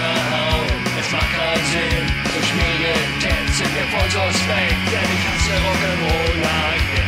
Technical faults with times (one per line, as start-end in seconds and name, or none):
2.30-2.33 loud pop